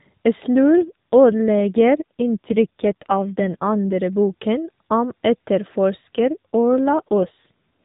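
A speech clip over an AMR narrowband mobile link shows two AMR rate drops, from 0.56 to 3.98 s and from 6.18 to 7.80 s. The voice turns rougher and more buzzy without any gap or band change, which fits the codec stepping down from 12.2 to about 5.9 kbps under a weak radio link.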